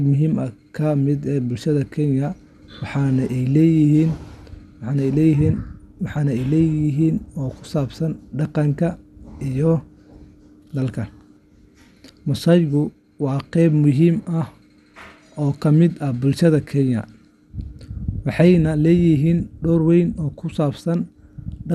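Throughout, the speech sounds dull and gurgling, with nothing above 12.1 kHz. This is likely MP2 compression, starving upper sub-bands, which fits a rate near 80 kbps.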